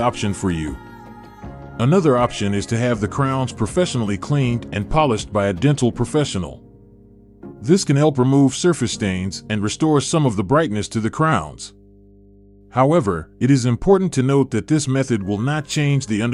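Mains hum runs throughout, a steady 50 Hz tone sitting roughly 30 dB below the sound, where power-line current has leaked into the signal path through grounding or nearby wiring.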